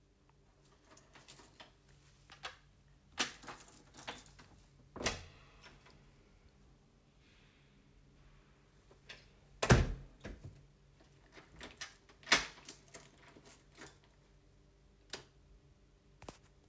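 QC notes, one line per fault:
10.17–10.70 s, jitter buffer speed-up: the sound hurries about 6% at unchanged pitch as an overfull buffer trims roughly 40 ms in short pitch-period cuts.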